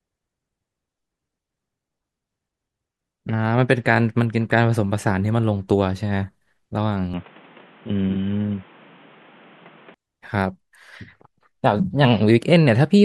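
From 7.14 to 9.94 s the speech turns dull and boxy, cut off above 3.8 kHz, with a different background noise and a level shift, likely the input switching to a poorer device.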